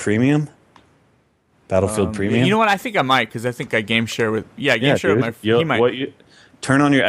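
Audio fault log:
Nothing in the speech stood out as a problem on listening.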